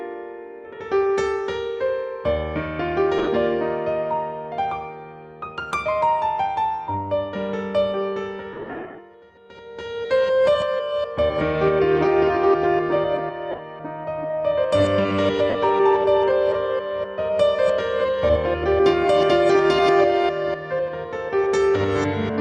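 At 3.18 s, 8.53 s, 13.51 s and 15.50 s the sound briefly turns into a hissy, grainy smear. The longest dropout, about 0.3 s of missing audio scattered across 0.45 s, sags in level during its longer gaps. These are lost LE Audio frames. The LC3 decoder covered each gap by replaying the last good spectrum with randomised phase and fading it, and the short 7.5 ms steps fit one of the two LC3 frame sizes.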